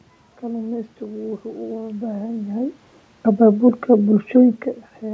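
No system faults present: the room noise belongs to the recording, the level shifts around two and a half seconds and again near four and a half are the talker moving relative to the microphone, and the band-limiting with nothing above 8 kHz is the ordinary signature of the G.722 call path at 64 kbps.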